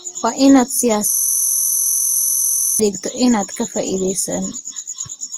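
Throughout, the speech carries mixed compression artefacts and nothing above 19.9 kHz. This is likely transcoding between lossy codecs, stacking Vorbis-like and Opus-like damage. From 1.10 to 2.80 s, a system hang loop repeats one 23.22 ms slice, heard as a steady 43.1 Hz buzz. This fits a frozen 1024-sample buffer.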